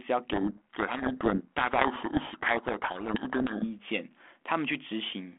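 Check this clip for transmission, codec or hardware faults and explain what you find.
There is one transmission fault, a codec payload misread, running from 0.32 s to 3.66 s. Across that stretch the speech is buried under harsh, grinding distortion, then clears abruptly. The sender and receiver disagree on the bit order of the G.726 code words, so the decoder receives plausible-looking ADPCM values but reconstructs each sample from scrambled differences, and the error compounds through the adaptive predictor. The underlying 32 kbit/s G.726 line, band-limited to roughly 250 Hz to 3.4 kHz, carries only light codec damage.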